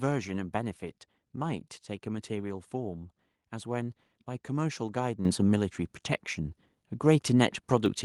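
At 5.25 s and 7.86 s the microphone volume stepped up, as software raised input gain by about 9 dB, then about 4 dB. Speech and background jump together, a sudden waveform-envelope step and a uniformly brighter spectrogram.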